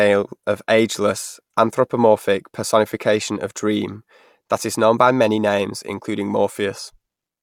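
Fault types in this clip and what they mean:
No faults detected in this speech recording.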